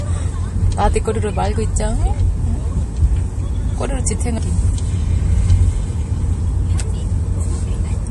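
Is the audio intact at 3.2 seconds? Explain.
No. The whole clip, including 3.2 seconds, plainly shows likely MP3 compression. Nothing is heard above 11.4 kHz. Weak frequency lines drop in and out between frames, giving a watery swirl, which fits a 48 kbps encode.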